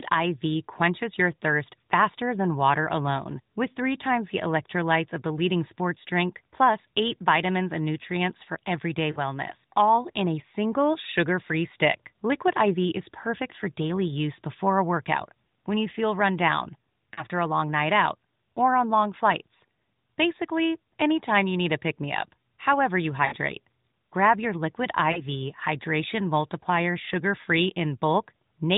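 Lost AMR speech frames occur at 9.12–9.19 s, 17.14–17.25 s, 23.26–23.36 s and 25.12–25.23 s. Each gap, about 40 ms and 60 ms at 23.26 s, fitting two or three 20 ms frames, is bridged by the decoder repeating the last good speech parameters at falling level. The result is a short drawn-out warble or dip, with the light narrowband coloration of the mobile codec.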